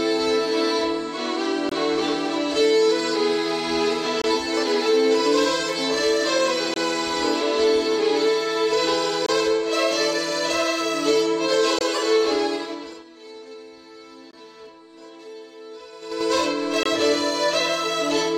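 Short holes break the sound at 1.69, 4.22, 6.74, 9.26, 11.79, 14.31 and 16.83 s. Each lasts about 23 ms and they recur every 2.5 s or so. This is a gap between chunks: the audio was delivered in blocks of about 2.5 s and silence was inserted at each join. Unlike a dropout, the sound on either side continues intact and the holes keep a strict rhythm. Zipper noise appears at two moments. From 12.47 to 13.12 s the level falls by roughly 20 dB in 3 dB steps. From 15.93 to 16.30 s it rises by roughly 20 dB in 5 dB steps. Both changes advance about ten times a second with no smoothing, so each step leaves a tiny click and a ticking rides on the moving level. The sound never stops during these stretches.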